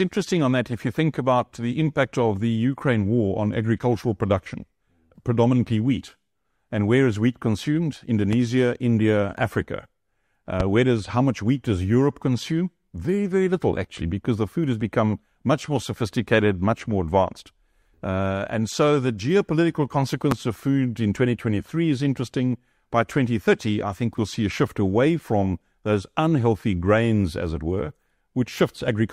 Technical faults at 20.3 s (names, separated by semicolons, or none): loud pop